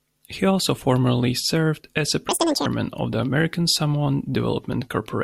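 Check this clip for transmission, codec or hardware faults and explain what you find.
One fault is present in this speech clip.

Audio read two samples at a time (double speed), from 2.29 to 2.66 s: the reader treated each pair of samples as a single frame, as if the stream had two channels or twice-wide samples. That stretch plays at 2x speed, an octave higher.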